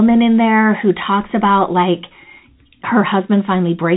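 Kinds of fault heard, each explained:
No kinds of fault are heard in this speech, so there are none to explain.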